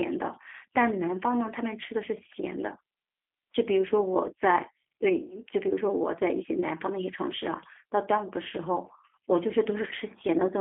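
From the first moment to the last, the speech runs through the G.729 codec at 8 kbit/s, squeezed into a line band of about 250 Hz to 3.5 kHz. Everything gets rebuilt from a filter model plus a few pulses per frame, so the speech comes out rough and plainly synthetic.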